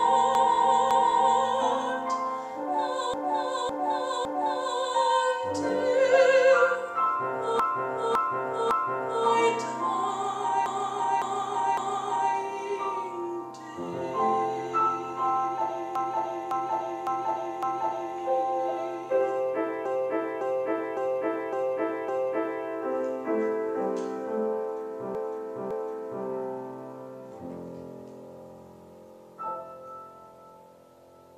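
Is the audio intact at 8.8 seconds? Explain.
No, 8.8 s falls inside a stretch of repeated frames from 7.6 to 9.27 s, where a 0.56 s block replays three extra times, stuttering and adding about 1.67 s.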